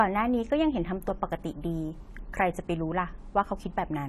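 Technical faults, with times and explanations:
Throughout, AAC compression: the speech stops dead at 14.1 kHz, with a fizzy, warbling smear on sibilants. This is likely AAC-LC coding at a low rate, around 32 kbps, starving bands of bits. A plain low-pass filter would dull the top without that swirl.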